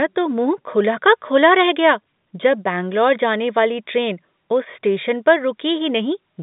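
No technical faults can be heard in this speech.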